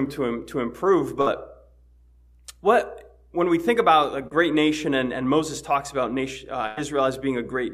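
A burst of packet loss occurs at 1.21 to 1.27 s. About 50 ms of audio never arrived, so the receiver extended the last sound it had for roughly 49 ms, fading it as it went. This gives a brief held buzz or hiss, after which the audio picks up 50 ms further along, with that stretch simply gone.

Short concealed packet loss follows at 4.27 to 4.32 s. Here only about 30 ms failed to reach the decoder in time. The receiver patched the hole by continuing the preceding sound for 36 ms, then blended back into the real signal. The result is a quick smear or wobble rather than an obvious gap, and a very short sound in that window can disappear.

A second burst of packet loss, longer, runs from 6.67 to 6.78 s. Roughly 100 ms was lost, and the receiver covered it with about 101 ms of synthesized continuation that trails off without ever dropping to silence. The stretched, fading tail is longer than in the first burst, and the audio rejoins 100 ms later than where it broke off.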